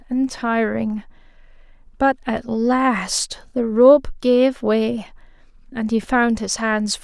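No technical faults can be heard anywhere in it.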